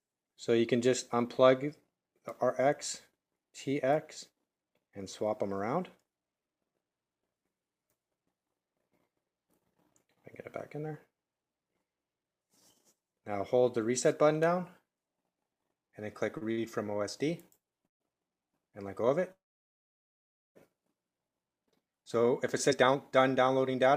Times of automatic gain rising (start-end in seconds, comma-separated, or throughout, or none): none